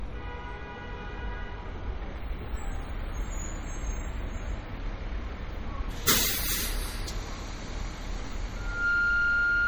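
Everyday sounds here, with a watery, swirly smear and blurred attacks all the way through, likely MP3 compression at a low bitrate around 48 kbps. From 8.56 s to the end there's a loudspeaker feedback squeal, a 1.4 kHz tone that swells in over about a third of a second to roughly 10 dB above everything else.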